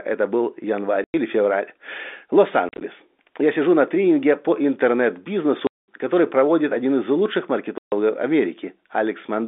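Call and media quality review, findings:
Packet loss, receiver inserting silence: speech holes at 1.04–1.14 s after "был январь", 2.69–2.81 s (scattered, runs up to 40 ms), 5.67–5.88 s before "который проводит один из", 7.78–7.92 s after "проводит один из лучших". Hole lengths step in 10 ms, fitting 10 ms packets. Hard gap edges. Line band of 250 Hz–3.6 kHz is heard through the G.711 telephone path.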